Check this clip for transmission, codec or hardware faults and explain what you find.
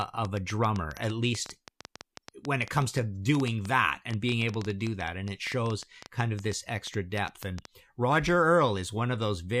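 One fault is present: a train of clicks running from 0.02 s to 7.66 s. Around seventy near-identical pulses arrive at roughly 7.7 per second, unevenly spaced, peaking about 10 dB above the speech. The likely cause is electrical interference or a faulty connection or power supply injecting brief pulses. They are heard as a ragged ticking over the speech and through its pauses. A waveform shows sharp spikes from 0.02 s to 7.66 s, and a spectrogram shows thin full-height vertical lines at irregular intervals.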